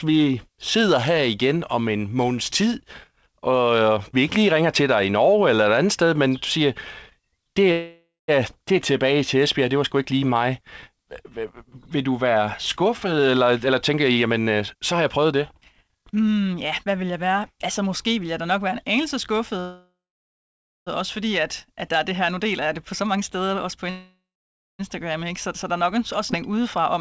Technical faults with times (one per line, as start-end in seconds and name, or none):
7.72-8.30 call audio freeze
12.46-16.21 jitter buffer speed-up
19.60-20.88 call audio freeze
22.36-23.89 jitter buffer speed-up
23.90-24.81 call audio freeze
25.63-26.95 jitter buffer speed-up
26.31-26.34 skip ahead